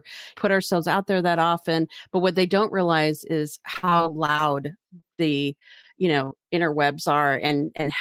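Packets were repeatedly lost or delayed from 3.73 to 4.41 s, 4.87 to 6.50 s and 7.34 to 7.84 s. Each hole, up to 58 ms, was patched by extending the previous sound, giving repeated packet loss: choppy, robotic speech with pieces missing, worst in the first stretch.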